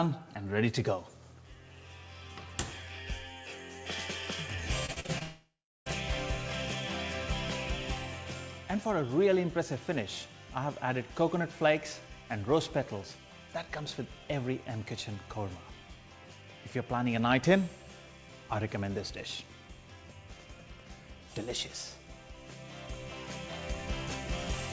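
The audio comes through a call link, with nothing above 8 kHz, which fits a wideband G.722 codec. From 4.86 to 5.23 s there is repeated packet loss with a robotic sound. Five short holes, the longest 42 ms, are patched by repeating earlier sound, so about 40% of that span is filled in. From 5.23 to 5.88 s the sound smears into a fading buzz and then about 0.33 s of silence. This is likely a long network dropout, and the missing audio never returns.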